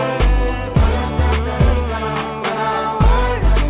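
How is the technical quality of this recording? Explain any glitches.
The technical quality is good, with no glitches to explain; the sound comes through a telephone-band call path with nothing above 4 kHz.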